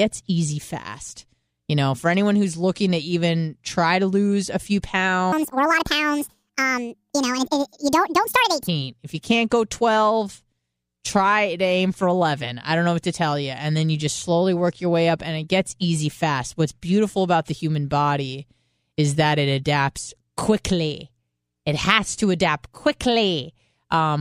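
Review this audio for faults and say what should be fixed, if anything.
A section at the wrong speed runs from 5.32 to 8.68 s, likely because that stretch was clocked against the wrong rate during playback or editing. It plays 1.72 times too fast, so the speech there jumps up by roughly ten semitones and sounds rushed and squeaky. Keeping every segment's sample rate matched to the project clock, or resampling on import, prevents this.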